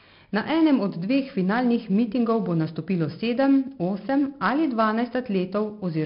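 From the first moment to the last, the speech carries 4-bit ADPCM compression: each sample is coded as a small step from a prediction, so a gritty hiss rides on every loud syllable, attacks crunch, and nothing comes through above about 5.3 kHz, which fits a low bitrate around 44 kbps.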